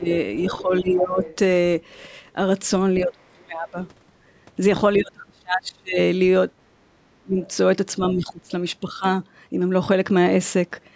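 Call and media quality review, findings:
Speech suppressed in double talk at 0.0–1.23, 3.03–3.78, 4.98–5.98, 6.76–7.38 and 8.12–9.04 s. Talker ducks, mildly at first and then by some 30 dB, likely the echo canceller attenuating both talkers during overlap.

Other side's voice leaking through at 0.39–1.36 s, roughly 15 dB under the talker, and as a brief scrap at 7.42–7.52 s, fainter still. Likely residual loudspeaker echo that the canceller failed to remove.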